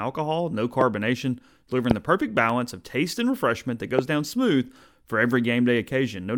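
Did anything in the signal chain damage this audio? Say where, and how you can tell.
Yes, in four places. The first kind is a loud pop, three single ones at about 0.81 to 0.83 s, 1.91 to 1.93 s just before "the perfect", and 3.99 to 4.01 s between "taste and refreshment that" and "down smooth for". Each lasts about 22 ms and peaks at about 20 dB above the speech, which keeps running underneath. That's the analogue wiring stage. The likely cause is a voltage step from a connector, switch or static discharge being shaped into a thump by the circuits after it.

The second is a block of digital silence at 2.50 s, right after "delivering the perfect" and before "of taste and refreshment". It's tiny, about 0.67 ms, which fits a 32-sample block of zeros. At that length it comes across as a tick, not an audible hole. The cut to zero and the return both happen with no fade. That points to the driver or buffer stage, where the output buffer wasn't filled in time for one short block.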